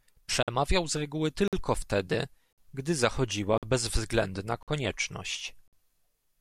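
The speech is cut by six holes, each 50 ms long, at 0.43, 1.48, 2.53, 3.58, 4.63 and 5.68 s. It's a gap between chunks: the audio arrives in 1 s pieces with silence inserted at each join, so the speech stutters on a steady clock.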